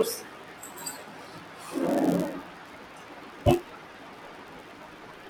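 Right from the start and all the way through, this speech has a block size mismatch with padding. One stage is handing over slightly shorter blocks than the next one expects, so the leftover in each block gets filled with silence. Those tiny gaps repeat at about 91.5 Hz, which you hear as a steady low buzz riding under everything. It also stretches the timing a touch, to 0.996 of normal speed, while the timbre stays the same.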